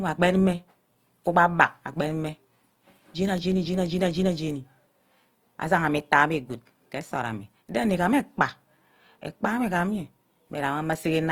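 Throughout, the speech has likely been through Opus compression in its music (CELT) mode at a low rate, fitting 24 kbps. Short of bits, the encoder fills bands with folded or noise-like content, so tones turn plainly rough and grainy, while bandwidth still reaches 20.2 kHz.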